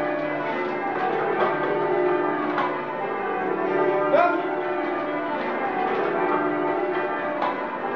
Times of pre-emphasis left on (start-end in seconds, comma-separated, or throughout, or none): none